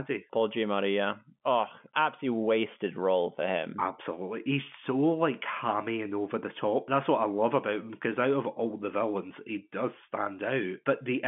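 No technical faults are audible in this speech.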